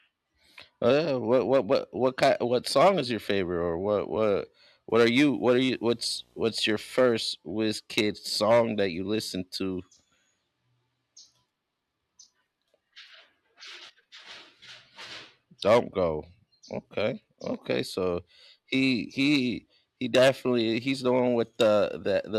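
Just after "what what", from 4.90 to 7.26 s, video or display buzz leaks into the speech: a display or video cable couples in a 59.94 Hz field-rate buzz with hash above it, well below the speech, plus a thin 15.7 kHz line whine. A spectrogram shows harmonic stripes and a steady high line.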